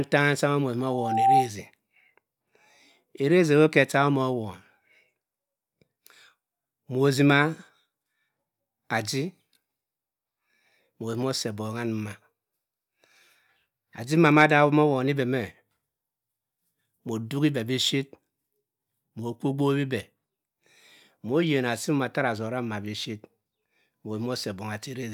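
From 0.80 to 1.50 s, loudspeaker feedback squeal: a 782 Hz tone swells over about half a second into a howl roughly 5 dB above the speech, as the mic-speaker loop runs away.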